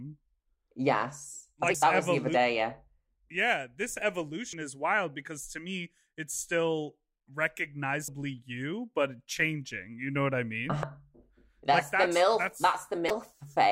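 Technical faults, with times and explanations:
1.74, 4.53, 8.08, 10.83 and 13.07–13.11 s, damaged data in a compressed stream: five short blips, the first right after "I like", another just before "you but changing", and one after "know what I mean". Bad bytes in the compressed speech make the decoder misread a frame, lose sync and hunt for the next valid header, so you hear a few milliseconds of garbage. The last one runs longer, about 36 ms.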